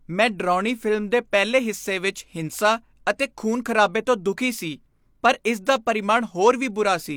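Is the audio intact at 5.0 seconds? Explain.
Yes, the speech at 5.0 seconds is intact, with no fault heard at that moment.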